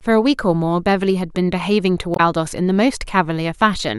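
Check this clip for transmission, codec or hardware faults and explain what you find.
One fault stands out in this speech clip: damaged data in a compressed stream, from 2.13 to 2.20 s. For about 70 ms the decoder is fed corrupted frame data, misreads it, loses sync and has to hunt for the next valid frame header before normal decoding resumes. It sounds like a short glitch in the speech. On a spectrogram it shows as a brief smeared or blocky burst breaking the speech harmonics; the waveform shows an abrupt, discontinuous patch.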